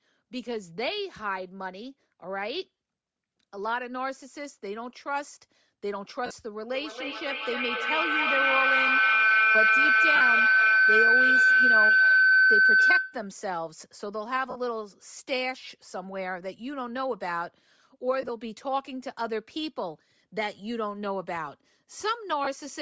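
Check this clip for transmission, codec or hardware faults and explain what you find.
Yes, there are three kinds of fault: codec damage throughout, six brief dropouts, and a feedback howl in the middle.

Bluetooth LC3 compression runs through the whole clip. The speech has a breathy, grainy edge, and the upper band sounds partly noise-filled. That is plainly audible damage, likely from LC3 coding. It fits a 32 kbps stream in 7.5 ms frames. Nothing reaches above 8 kHz.

Lost LE Audio frames occur at 2.77 s (22.5 ms), 6.26 s (45 ms), 10.16 s (45 ms), 14.50 s (52.5 ms), 18.22 to 18.30 s, and 22.44 s (22.5 ms). At 18.22 s the losses are scattered over 75 ms, with the longest run about 15 ms. In each gap the decoder repeats the last spectrum with scrambled phase. The speech smears into brief noise.

A feedback howl runs from 6.71 to 13.42 s. The microphone picks up a loudspeaker carrying the same call. 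Each trip round the loop adds gain. The sound narrows to a tone around 1.5 kHz. Each trip round the loop takes roughly 300 ms, and the howl peaks about 9 dB above the speech.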